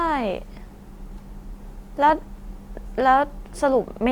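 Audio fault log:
2.09–2.13 s, loud pop: a single sharp pop rises a few decibels above the speech, which carries on underneath. It is likely a voltage spike from a switch, plug or static discharge. It shows as a narrow vertical spike in the waveform and a thin full-band stripe on a spectrogram.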